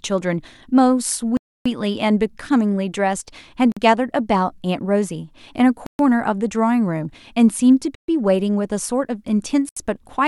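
Five gaps cut the speech to dead silence, at 1.37 to 1.66 s (285 ms), 3.72 to 3.77 s (47 ms), 5.86 to 5.99 s (127 ms), 7.95 to 8.08 s (132 ms) and 9.69 to 9.76 s (74 ms). Each is likely a Bluetooth stall: the headphones' buffer ran empty while delayed packets were resent, so playback paused and then resumed. The waveform drops to a flat line and the spectrogram shows clean, full-band vertical blank strips.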